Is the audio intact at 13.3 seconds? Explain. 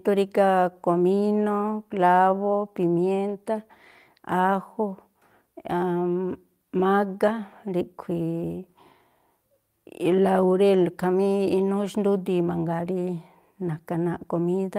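Yes, the audio is intact at 13.3 seconds, with no fault present at that moment.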